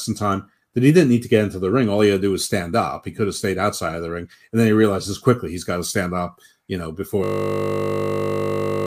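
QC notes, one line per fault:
7.24–8.86 s, system hang loop: Right after "stand up you know", the system stalls. The sound hardware keeps replaying one 20 ms slice of buffer over and over until the clip ends. That exact repetition at 50 Hz is heard as a steady, flat buzz.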